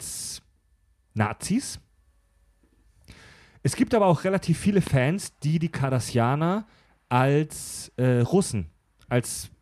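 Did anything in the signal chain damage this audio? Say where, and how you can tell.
Yes. A single loud pop sits on the speech from 4.87 to 4.89 s. It peaks roughly ten decibels above the surrounding level while the talking carries on underneath without a gap, and that rules out a dropout or buffer glitch, which would remove or repeat material. The likely origin is the analogue wiring stage, where a voltage step from a connector, switch or static discharge was added to the signal and shaped into a short thump by the circuitry after it.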